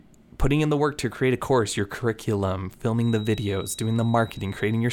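Feedback whistle from 2.93 s onward, after "a course your curriculum": a steady 3.8 kHz tone beneath the speech, likely speaker-microphone loop hovering at feedback.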